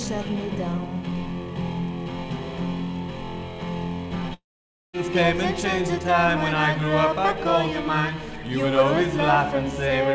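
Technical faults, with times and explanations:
4.34 to 4.95 s, long network dropout: the sound breaks off, its last moment is stretched into a buzzy tail that fades, and about 0.53 s of near silence follows before the audio resumes with roughly 0.6 s of material gone. The likely cause is a run of lost packets that the receiver could only conceal. On a spectrogram, energy below the call path's 8 kHz ceiling smears into a fading band, then a dark gap. The waveform envelope shrinks to a flat line.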